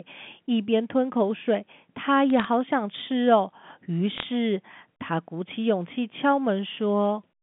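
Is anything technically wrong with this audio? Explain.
Yes. Bit errors on a digital phone line: two short bursts of sharp crackle, 2.30 to 2.45 s and 4.16 to 4.25 s. Flipped bits, roughly a fifth of a percent, each corrupt one A-law sample; sign or high-bit hits become clicks over the telephone-band speech.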